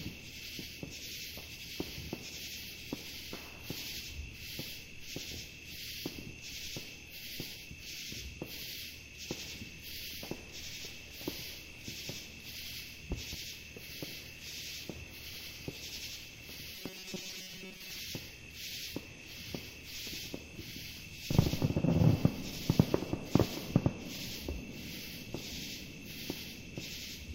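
This recording of everyday sounds has two faults. From 13.12 to 13.36 s, a sudden voltage step or pulse, likely from a plug, a switch, static or a driver glitch, entered the signal path. The circuitry downstream shaped it into a loud pop heard twice in quick succession, about 10 dB above the surrounding sound, which carries on underneath. From 16.76 to 18.00 s, the playback or capture chain was likely starved of fresh audio and filled the gaps by looping the last short buffer while the real material was dropped. The result is robotic sound from repeated short buffers, with roughly 70 percent of that stretch made of repeats. The loop rate produces a rigid, metallic buzz at 188 Hz, which fits a buffer of about 5.3 ms and only loosely follows the original sound.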